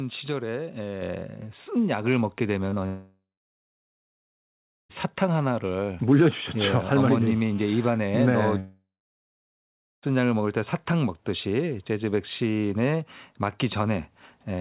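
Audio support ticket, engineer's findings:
Mic volume stepped up at 1.02 s: voice and background jump about 4 dB together. Client AGC saw a quiet mic and bumped the device input gain in one go. Worth pinning the input level.

Short concealed packet loss, 2.70–2.74 s and 2.74–2.78 s: two back-to-back 20 ms holes patched by the decoder extending the last sound, then crossfading back. Heard as a quick smear/wobble. Packets reached the decoder too late.

Long network dropout, 2.86–4.91 s and 8.59–10.04 s: last sound stretched into a fading buzz or hiss, then silence for about 1.7 s and 1.2 s. Audio picks up further on, with roughly 2 s and 1.4 s gone. Likely a network stall upstream.

GSM phone buzz, 6.64–7.88 s: hard raspy 217 Hz buzz with a stack of harmonics, steady, about 24 dB under the signal. A 2G handset on an active call sat near the mic chain, and its bursts got rectified. Sits on top of the G.711 narrowband path, nothing above 4 kHz.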